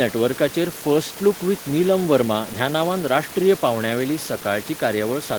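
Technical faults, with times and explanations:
No faults turn up anywhere in this speech recording, and the only extra sound is some room noise sitting about 19 dB under the speech, which belongs to the room itself rather than to anything going wrong in the system.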